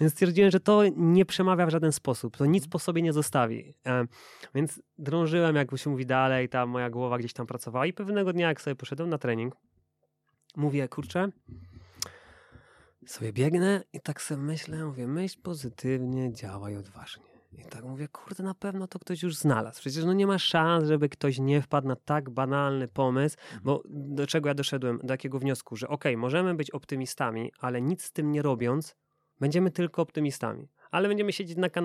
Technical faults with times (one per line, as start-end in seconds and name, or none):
none